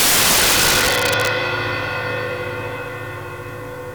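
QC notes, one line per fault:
0.00–1.27 s, integer overflow: about 12 dB overdrive pushes peaks past the integer limit, wrapping them to opposite sign, producing violent cracks far harsher than clipping.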